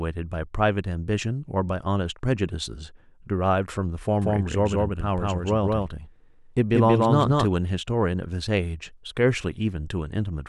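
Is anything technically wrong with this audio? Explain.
Yes. From 4.22 to 7.46 s the speech carries a doubled audio track: a second full-band copy about 200 ms behind, roughly as loud as the original, with no decay. It is likely a second capture path or misaligned edit, and appears abruptly on the waveform as overlapping repeated envelopes and on the spectrogram as shifted duplicate patterns.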